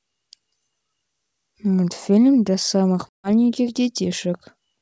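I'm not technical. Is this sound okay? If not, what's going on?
No. At about 3.1 s there is packet loss on an ADPCM call: roughly 150 ms of the speech drops out into a sudden silence, and the trouble lasts until about 3.3 s. When the speech resumes, the decoder has lost track of the sender, so the sound briefly returns slightly distorted before settling.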